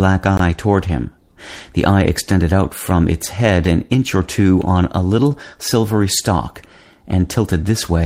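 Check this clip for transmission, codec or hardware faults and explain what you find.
Two kinds of fault are audible in this speech clip: one block of digital silence and four short stretches rebuilt from error correction after lost packets.

Block of digital silence at 0.37 s, lasting about 20 ms. The output buffer likely wasn't filled in time, so zeros were played in its place. The sound drops straight to nothing and back with no fade, which is heard as a short hole. On a waveform it shows as a flat-line gap with sharp edges. On a spectrogram it appears as a blank vertical strip.

Lost packet rebuilt from error correction at 0.87 s, 3.65 s, 5.31 s and 6.17 s. Each covers one 20 ms packet. The 3.65 s event falls between "out from its head" and "an inch or two", and the 5.31 s event comes just after "or two on a". Each lost packet was replaced by the low-bitrate copy carried in the next one, so there is no gap, only a brief rough, noisier patch. 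The waveform stays continuous. On a spectrogram each shows as a 20 ms column with smeared, grainier harmonics.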